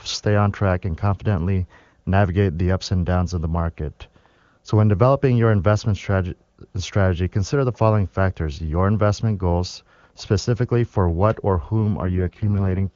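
Right after "for what or whom", from 12.01 to 12.93 s, there's an AMR rate drop from 23.85 to 6.6 kbit/s, so the speech turns rough and raspy without losing its band.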